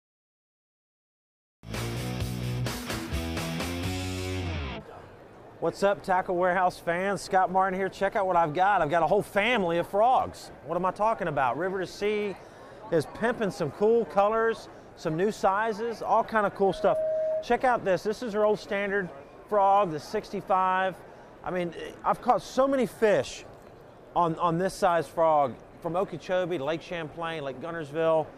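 The clip is a recording of general audio with one fault, a loudspeaker feedback squeal from 16.61 s to 17.53 s. A steady tone at 631 Hz appears and swells over roughly 0.4 s. It ends up about as loud as the surrounding sound. The cause is a microphone picking up a loudspeaker it feeds. At 631 Hz the loop gain exceeded one, so that frequency kept growing.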